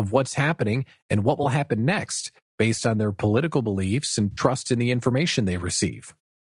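Throughout the speech there is a rough, grainy texture with noise between the harmonics, likely from low-delay AAC compression at a bitrate near 32 kbps, steady rather than patchy. At 1.43 to 1.46 s and again at 4.31 to 4.41 s, AAC frame loss with concealment leaves brief smeared, noisy patches. The decoder filled in roughly 20 ms and then 60 ms from the last good spectrum, unlike the constant codec grain.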